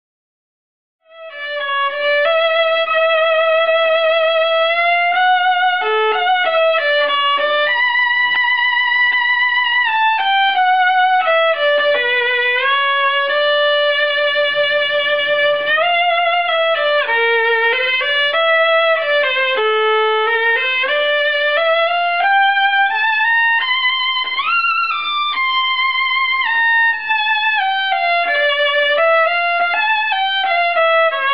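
There are no technical faults to describe; the smooth fade in that reaches full level at 2.18 s is an ordinary edit.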